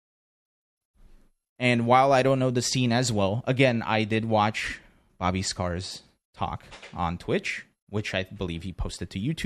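No technical faults can be heard in this recording.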